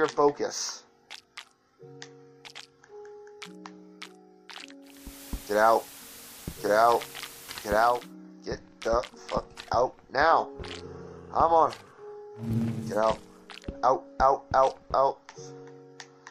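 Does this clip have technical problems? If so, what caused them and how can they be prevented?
Yes. From 4.81 to 8.15 s, digital radio blending to analogue cross-fades over 419 ms to FM and back. Level shifts by about 2 dB and hiss rises to roughly 20 dB below the signal, which shows as a raised broadband noise floor on a spectrogram. A stronger digital signal or a better antenna prevents this.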